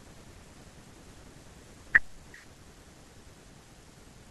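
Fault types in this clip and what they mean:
No technical fault can be heard anywhere in the speech recording, with the signal keeping continuity throughout.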